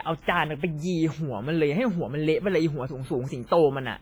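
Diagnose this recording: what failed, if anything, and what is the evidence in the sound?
WMA compression, heavy, across the whole clip: at the codec stage, the speech carries a ringing, washy smear around each syllable, with hiss that swells and fades as the sound does, and weak detail is missing from the spectrum. The likely cause is a low-bitrate WMA transform encode, with damage this heavy pointing to around 24 kbps. Long transform blocks spread quantisation noise over tens of milliseconds, and too few bits zero out the quieter spectral lines.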